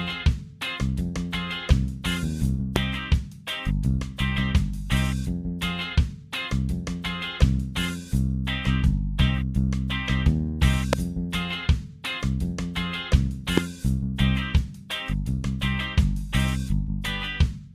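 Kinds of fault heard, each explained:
Loud pop: three brief sharp pops about 20 to 25 dB above the sound, which continues beneath; likely a sudden voltage pulse added to the signal.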